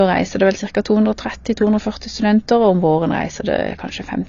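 From start to finish the speech is band-limited, with nothing above 7.2 kHz, so it sounds dull and a bit closed-in. The damage is plainly audible: sibilants come out fizzy and smeared, and held vowels pick up a warble. That's likely AAC compression. At a low bitrate, around 24 kbps, the encoder drops the top of the spectrum and quantises what's left coarsely, leaving gaps that turn into that swirly texture.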